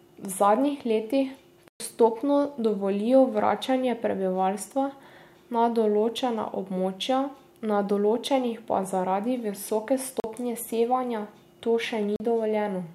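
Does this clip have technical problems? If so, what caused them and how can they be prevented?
Yes, there are three blocks of digital silence in this speech: a 120 ms hole at 1.68 s, then two shorter 40 ms dropouts at 10.2 s and 12.16 s. The audio drops straight to zero and comes back with no fade, and the longer one reads as a brief gap. That's what happens when the output buffer isn't filled in time. Giving the audio thread higher priority or using a larger buffer should prevent it.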